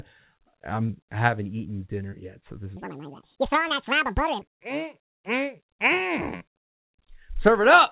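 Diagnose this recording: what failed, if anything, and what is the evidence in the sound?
The section from 2.77 to 4.42 s, right after "yet so this", is a section at the wrong speed. It runs 1.9 times too fast. Pitch jumps by roughly ten semitones, and the speech turns high and hurried. The stage is playback or editing, likely a resampling clock mismatch.

Two short concealed packet losses come from the network stage, at 3.68–3.73 s and 6.37–6.44 s. Each drops about 30 ms of audio. The receiver extends the previous sound for 26 ms and 33 ms, then blends back. This leaves a brief smear inside the G.711 call band, which stops at 4 kHz.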